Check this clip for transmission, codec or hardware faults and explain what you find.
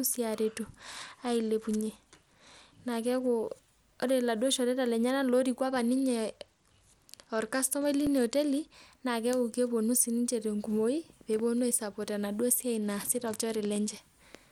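Two kinds of fault are present: three spells of a Bluetooth SBC bit pool drop, and one repeated buffer.

From 0.41 to 3.28 s, 5.70 to 8.74 s and 12.75 to 13.99 s the speech turns dull and gritty, as a congested link squeezed SBC from a bit pool near 31 to one near 13 (about 94 kbps).

At 8.07 s a tiny click sits inside the second dull spell, a repeated buffer where one 1.5 ms block, fitting a 64-sample buffer, played twice because fresh audio arrived late.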